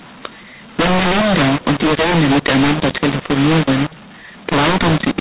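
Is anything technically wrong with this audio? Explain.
Yes. Mu-law and A-law are mixed up for the whole clip. The speech was coded with G.711 mu-law but decoded with the A-law curve. The two laws map their 8-bit codes to different levels, so every sample lands at the wrong amplitude. Some come out louder and some quieter, and the quietest codes are pushed well above silence. The speech sounds harsh and gritty, and the gaps between phrases fill with a noisy hiss. The audio stops at about 4 kHz, which fits the 8 kHz telephone format.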